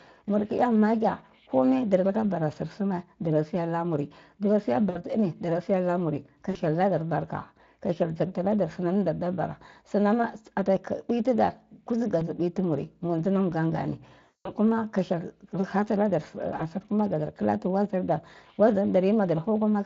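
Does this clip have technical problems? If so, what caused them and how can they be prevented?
Yes. VoIP packet loss concealed by the speech codec occurs at 4.89–4.98 s (after "dara siya"), 6.51–6.58 s, 12.19–12.24 s, 14.23–14.52 s (the longest, before "ka hyel") and 16.57–16.62 s. At each gap the Speex decoder repeats its last pitch and spectral shape at falling gain, so the speech smears into a fading buzz or coloured noise. On a spectrogram this shows as flat, repeated harmonic bands. In the waveform it appears as a decaying, periodic stretch. A jitter buffer with forward error correction or redundant packets would prevent it.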